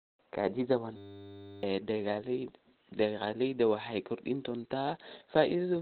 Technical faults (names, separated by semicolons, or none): Opus compression; system hang loop